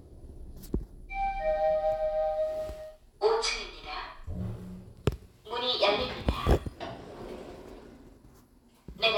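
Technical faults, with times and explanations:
No technical faults turn up anywhere in this recording of sounds, so there's nothing to flag here.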